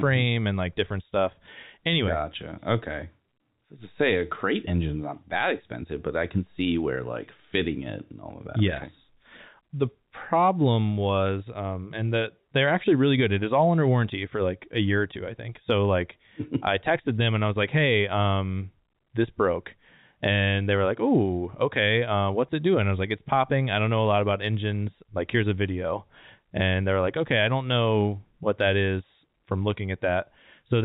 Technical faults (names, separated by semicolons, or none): none